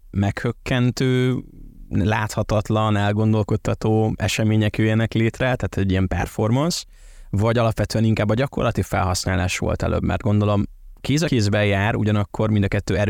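At 11.27 s the speech jumps forward by roughly 70 ms, a case of compressed frames skipped, which fits about three 24 ms frames being lost or rejected by the decoder. On the waveform the envelope steps abruptly, and the spectrogram shows a narrow vertical seam where formants jump.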